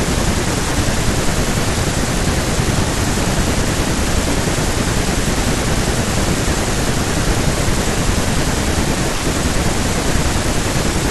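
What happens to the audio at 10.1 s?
Between 10.10 and 10.12 s the speech has chunks out of order: one 11.6 ms chunk plays one chunk late, after the one that should follow it. Nothing is missing, but three hard joins produce a brief jumbled stutter.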